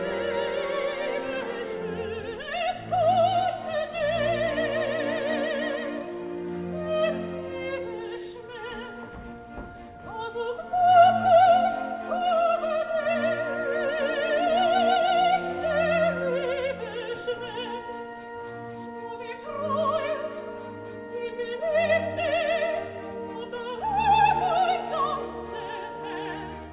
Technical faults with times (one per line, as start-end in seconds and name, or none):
none